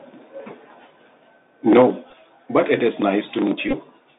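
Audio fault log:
throughout: Bluetooth CVSD headset codec. Band is confined to 200 Hz to 3.7 kHz, so the spectrogram shows nothing above; coarse one-bit steps leave granular hiss and scratchy sibilants.
1.76–1.86 s: microphone overload. Peaks flattened at the ceiling, around a tenth of samples over by about 5 dB, likely too much input gain, giving a harsh crackle on the waveform's squared-off tops.
1.82 s: microphone volume stepped down. Level drops abruptly by about 3 dB right inside the distorted peak; the waveform envelope shows a sudden step, consistent with software cutting input volume.
2.10–2.14 s and 3.69–3.74 s: Bluetooth headset packet repeated. Lost audio, 15 ms then 37.5 ms scattered across 30 and 45 ms, is refilled by repeating 3.75 ms chunks, producing ticks and a brief 267 Hz buzz seen as harmonic striping.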